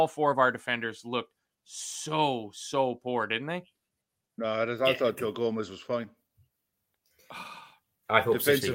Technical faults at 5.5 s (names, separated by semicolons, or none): none